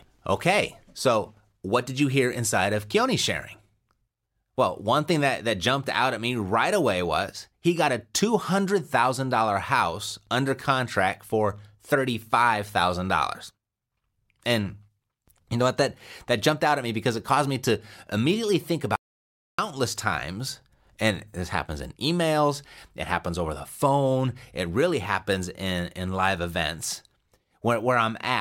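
At 18.96 s, right after "me to immediately think", the speech cuts to dead silence with no room tone until 19.59 s, resuming at "times and this happens". This audio dropout to silence, about 0.63 s, likely came from a lost input while recording continued writing silence.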